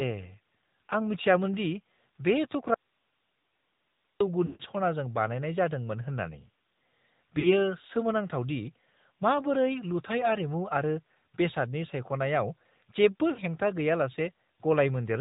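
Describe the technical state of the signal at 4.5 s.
At 4.5 s the audio sits inside a burst of lost AMR speech frames from 4.46 to 4.63 s. The decoder repeats its last pitch and vocal-tract settings with falling gain, so the sound drags into a buzzy smear and fades. On the waveform the envelope decays smoothly; the spectrogram shows frozen harmonics. Around it runs the AMR narrowband mobile codec. Plainly buzzy, synthetic coding, which fits a mode near 10.2 kbps, leaves a spectrogram that is empty above 4 kHz.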